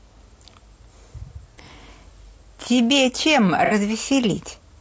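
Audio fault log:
throughout, low-delay AAC compression: rough, grainy speech likely from short-frame AAC-ELD near 32 kbps; the spectrogram shows blurred harmonics with noise filling the gaps between them.
1.55–1.60 s and 3.65–3.73 s, AAC frame loss with concealment: 30 ms then 60 ms smeared, noisy patches rebuilt from the previous spectrum; the spectrogram shows the previous spectrum smeared across each gap.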